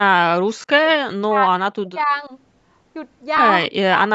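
Bluetooth LC3 compression runs throughout: the speech has a plainly audible grainy, breathy edge, likely from LC3 coding at a low bitrate, which fits 48 kbps in 10 ms frames, within a band that stops at 8 kHz.

Speech suppressed in double talk appears from 0.0 to 0.82 s. The voice dips by as much as about 40 dB and breaks up, likely because an echo canceller could not separate this talker from the far side's echo during overlapping speech.

Lost LE Audio frames occur from 0.57 to 0.64 s, inside that dip. About 70 ms of dropouts are scattered over 100 ms, in runs of roughly 20 ms at most, which fits lost 10 ms frames. The decoder patches each gap with a recycled spectrum, leaving a brief noisy smear.

Speech suppressed in double talk returns from 0.98 to 2.32 s, with the same drops of up to about 40 dB covering roughly a second of the speech.

Lost LE Audio frames recur at 3.37 to 3.40 s. 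Two frames, 20 ms in all, are lost here, concealed as a short grainy blur.

Speech suppressed in double talk appears again from 3.68 s to the end. The voice is pulled down by up to about 40 dB for roughly 400 ms of that stretch.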